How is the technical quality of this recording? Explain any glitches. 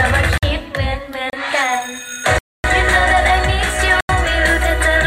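The recording is marred by four dropouts, each a block of digital silence. The output buffer was likely not filled in time, so zeros went out instead of audio. The signal cuts to dead silence and back with no fade. The dropouts fall at 0.38 to 0.43 s (50 ms), 1.30 to 1.33 s (30 ms), 2.38 to 2.64 s (256 ms), and 4.01 to 4.09 s (85 ms), the last fitting a 4096-sample buffer. The shorter ones sound like short holes, the 256 ms one like an audible hole.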